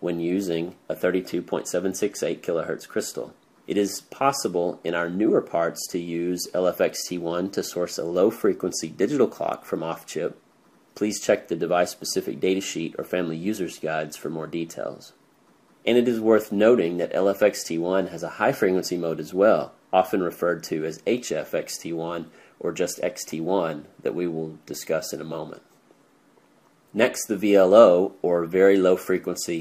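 A corrupt frame decoded at 5.29 to 5.34 s puts a 50 ms disturbance into the sound. Flipped bits in the compressed stream, spread across around seven short frames, went undetected, so the decoder read wrong gains or wrong spectral codes and rebuilt energy at frequencies that never belonged there. The result is a brief burst of misplaced content, with its error reaching roughly -15 dBFS, before normal decoding resumes.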